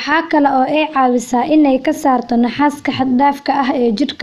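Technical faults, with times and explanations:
No technical faults can be heard in this speech recording; the signal runs without any audible disruption.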